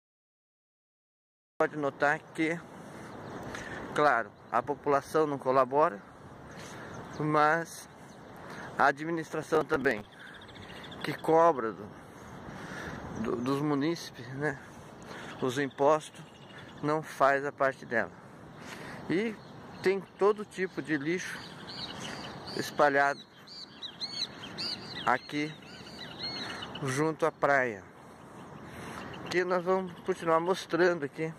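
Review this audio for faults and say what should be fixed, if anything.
The audio opens with a cut-off start. Digital silence runs from 0.0 s to 1.60 s, and the sound enters abruptly at 1.60 s. There is no attack or fade-in, so it begins mid-sound, as if capture began late and caught the material already under way. That hard entry is the edge to fix. To prevent it, start recording a second or two before the source begins.

From 9.43 s to 10.12 s there is processor overload crackle. The sound turns gritty and torn for about 0.7 s, then clears. The processor fell behind and missed a run of small buffer deadlines, around twenty of them. Each miss replayed a scrap of old audio with hard edges. The short spacing of the tearing suggests buffers of roughly 5 ms. To prevent it, reduce the processing load or use a larger buffer during recording.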